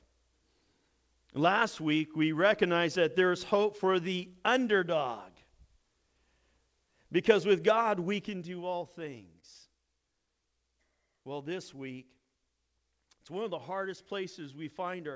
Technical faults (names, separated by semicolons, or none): repeated stalls (stutter)